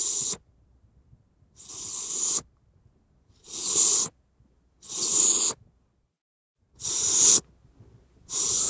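Nothing technical goes wrong anywhere in these sounds, so there's no fault to point to at any moment.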